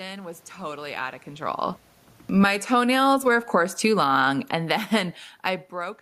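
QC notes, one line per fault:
2.28 to 6.01 s, automatic gain falling: Just after "totally out of control", the level starts sinking and keeps dropping to the end. The gain control judged the input too loud or its background noise too strong and lowered its gain gradually, so the room noise sinks together with the speech.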